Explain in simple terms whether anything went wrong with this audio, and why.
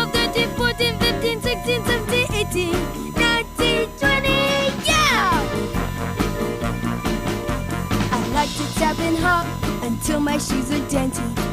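USB whine runs through the whole recording, from the first second to the last: a steady, high-pitched tone at 1 kHz that sits beneath the sound. It comes from a USB connection. The bus pulls power in regular bursts a thousand times per second, and that rhythm leaks into the audio through the shared power or ground wiring. The result is a whine that never changes pitch, because it follows that fixed rhythm.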